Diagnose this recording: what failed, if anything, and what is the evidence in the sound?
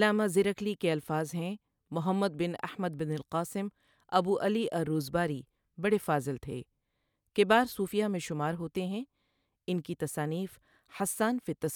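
Faint ticks, about ten per second, mark the speech from 0.12 to 11.69 s: clock slip clicks, likely unsynchronised converter clocks about 200 ppm apart.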